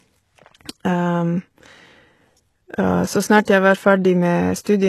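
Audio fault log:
throughout, HE-AAC compression: treble is rebuilt from copied lower bands rather than original, and it sounds gritty and lispy, likely from band replication at a low bitrate near 16 kbps.
0.93 s, dropped samples: a single sharp click as the waveform jumps across a gap of a couple of samples, likely a tiny loss in the stream.
3.45–3.48 s, pre-echo: about 24 ms of hiss precedes the attack before "jeg var" as block quantisation noise spreads ahead of the onset, softening it.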